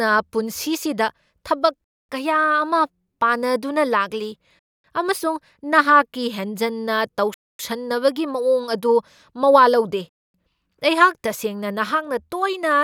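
Speech interrupted by a gap between chunks at 1.84, 4.59, 7.34 and 10.09 s, each a 250 ms hole, because silence is left at each join between 2.5 s chunks. On a waveform and spectrogram these appear as evenly spaced, hard-edged blank strips.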